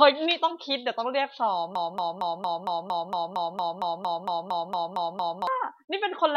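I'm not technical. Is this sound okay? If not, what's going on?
No, something goes wrong partway through this speech. From about 1.75 seconds to 5.47 seconds it gets stuck in a broken-record loop. A tiny slice of sound, about 0.23 seconds long, plays over and over, back to back, sixteen times. Whatever should have been said during those few seconds is simply gone. The likely cause is the player or stream stalling and repeating the last bit it had until it caught up.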